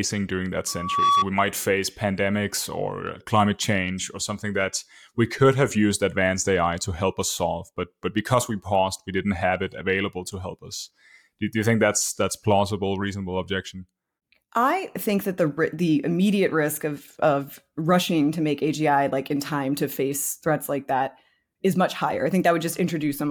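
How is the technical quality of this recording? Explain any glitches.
The recording has one clear glitch. At 0.67 to 1.26 s there is loudspeaker feedback squeal: the mic-speaker loop runs away at 1.1 kHz, swelling within half a second above the speech, unlike a steady tone.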